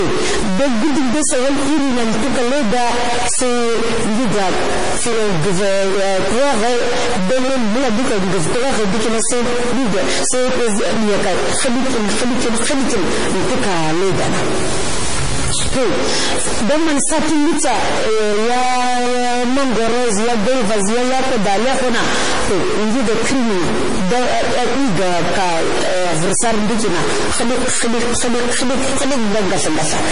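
A data line or converter bit likely stuck at a fixed value corrupts about half the samples throughout this speech recording, giving distortion and noise that fills the pauses. The stuck bit is joined by heavy MP3 compression, likely at a starved bitrate around 32 kbps, which removes everything above 10.5 kHz and leaves a watery, swirling texture with smeared attacks across all 30 seconds.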